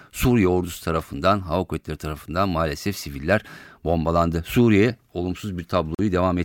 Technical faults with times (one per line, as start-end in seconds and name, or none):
5.95-5.99 Bluetooth stall